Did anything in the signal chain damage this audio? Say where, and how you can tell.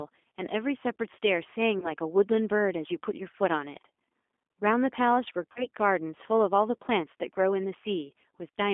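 Yes. The damage is at the codec stage. The whole clip sits in roughly 250 Hz to 3.5 kHz, and the speech sounds rough and synthetic throughout. That fits an 8 kbit/s G.729 coder rebuilding each 10 ms frame from a filter, a pitch predictor and sparse pulses.

There is also damage at the network stage, from VoIP packet loss concealed by the speech codec. Short fading smears, buzzy or noisy, occur at 0.30 to 0.32 s, 1.80 to 1.89 s and 5.52 to 5.66 s. The decoder bridged gaps of 20, 20 and 40 ms by extending its last pitch and filter. The sound stays weak until it recovers.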